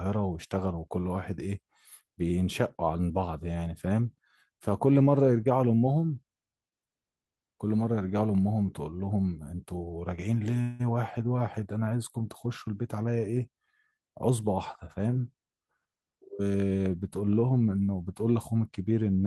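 At 10.61 s a call audio freeze holds the last sound as a fading buzz for 181 ms, to 10.82 s, likely from delayed packets emptying the jitter buffer. Speech resumes intact but 181 ms late. A spectrogram shows frozen, smeared bands, and the waveform a decaying stretch with no silence.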